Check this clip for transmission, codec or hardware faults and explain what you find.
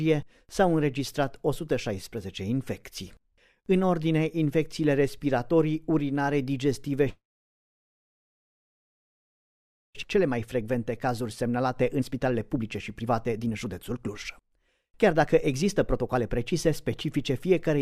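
Three transmission faults follow one another from about 7 s onward.

From 7.09 to 9.97 s there is a call audio freeze. The sound stops and the gap is filled for about 2.85 s, with roughly 2.74 s of that fully silent. Nothing is lost. The audio resumes where it left off, 2.85 s later than before. That pattern most likely comes from delayed packets draining the jitter buffer. On a waveform it shows as a flat stretch. A spectrogram shows a brief smeared continuation of the last spectrum before it goes blank.

At 10.03 s comes a skip ahead. Roughly one and a half seconds of audio vanish with essentially no gap, and the material on either side is butted together. This happens when a stretch of audio is dropped, either in transit or by an overflowing jitter buffer, while later audio is already waiting. A spectrogram shows an abrupt vertical seam where the harmonic patterns change instantly. The waveform shows a sudden change of envelope with no pause.

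From 10.16 to 17.78 s a jitter buffer speed-up runs the audio about 15% fast at unchanged pitch. In total about a second is removed as tiny pitch-period-sized cuts, which trims the remaining excess delay. It sounds hurried. On a spectrogram the harmonics stay at the same frequencies while events sit closer together in time. The waveform shows compressed syllable spacing with no visible gaps.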